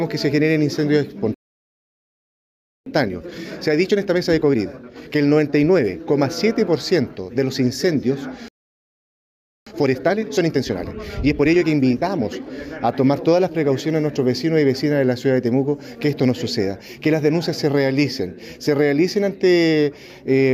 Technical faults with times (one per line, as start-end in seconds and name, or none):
1.34-2.86 playback stall
2.86-5.86 time-compressed catch-up
8.48-9.66 playback stall
9.66-12.66 time-compressed catch-up